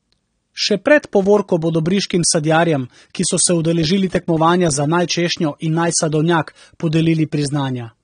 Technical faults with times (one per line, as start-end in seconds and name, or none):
0.00-8.03 AAC compression